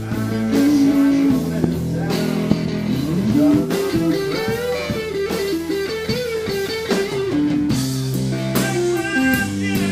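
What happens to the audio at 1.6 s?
At 1.64 to 1.66 s there's a single loud pop, a sharp click that jumps well above the surrounding sound before the audio carries on underneath. It's likely a sudden voltage pulse, say from a switch, plug or static, getting into the signal chain.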